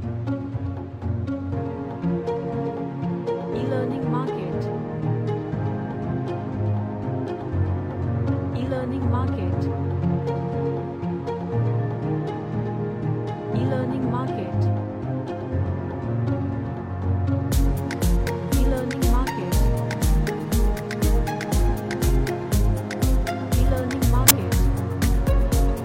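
A short, harsh squeak of noise bursts out at 24.28 to 24.31 s, lasting about 30 ms. This is a corrupt frame decoded: one compressed frame arrived with damaged bits, and the decoder reconstructed it anyway. Misread gains and codes scattered energy into the wrong frequencies, so for the span of that single frame the output turned into an unrelated blip.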